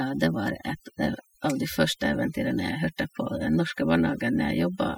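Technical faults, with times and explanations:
Throughout, overdone noise removal: the denoiser's cranked too hard, gating bands near its noise estimate, so the background drops to twinkly near-silence and quiet parts of the speech go with it.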